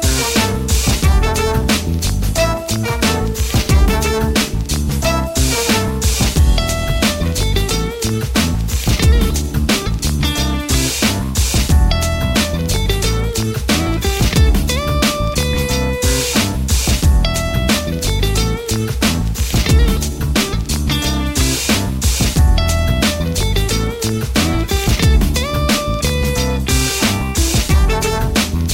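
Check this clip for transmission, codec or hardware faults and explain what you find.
Nothing in the transmission path, encoding or playback hardware audibly degrades this audio at any point.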